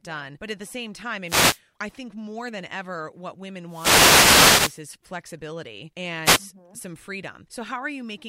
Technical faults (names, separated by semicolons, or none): wireless microphone noise hit